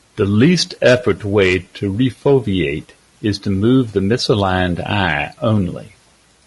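Throughout, the speech sounds rough and grainy, with noise between harmonics and a thin top band, likely low-delay AAC compression at a bitrate around 32 kbps.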